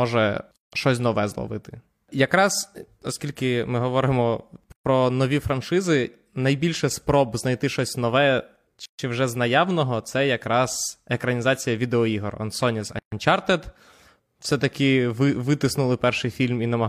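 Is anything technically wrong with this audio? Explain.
Yes. The speech contains four gaps at a join of encoded pieces, spaced every 4.0 s: 0.56–0.72 s (about 160 ms, just before "щось нове зловити"), 4.72–4.86 s (after "оскільки ми говоримо"), 8.86–8.99 s (after "спроб знайти щось нове"), and 12.99–13.12 s, the last three about 133 ms each. Separately encoded segments were joined without trimming the encoder's leading delay and final-frame padding. Each join opens a hole of silence with smeared edges, after which the speech resumes where it stopped.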